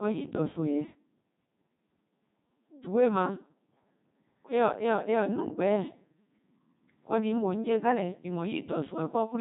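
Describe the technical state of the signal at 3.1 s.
At 3.1 s the speech is still passing through the Codec 2 vocoder, as it does for the whole clip. It sends only pitch, voicing, energy and a spectral envelope, and the decoder rebuilds the sound from sine waves. At this moment the voice is robotic and buzzy, with heavy codec damage, a rate consistent with 2.4 kbit/s, and nothing above 3.8 kHz.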